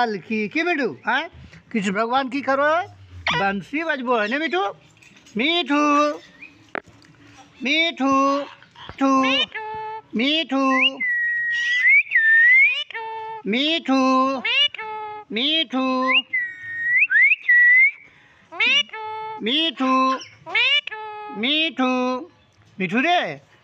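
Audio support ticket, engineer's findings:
No audible faults found.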